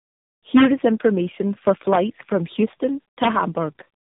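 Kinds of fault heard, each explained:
Tandem speech coding: The speech passes through three speech coders in a row, with a G.711 link between each, so every coder works on the last one's output. It sounds rough, muffled and warbly, with nothing above 3.7 kHz.
Integer overflow: A loud peak around 1.93 to 1.96 s goes over the integer limit by about 2 dB. The sample values wrap to the opposite sign instead of being limited. The result is a brief, violent crack, harsher than clipping.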